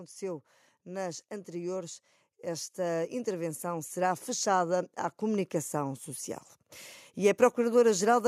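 From 0.18 s to 6.08 s the automatic gain control, having judged the incoming speech too quiet, keeps raising its gain, an automatic gain rising fault that adds about 10 dB over nearly six seconds. Because the boost is applied to the whole signal rather than to the talker alone, the voice and the background noise swell together, the room growing steadily louder and closer along with the speech instead of holding a fixed level.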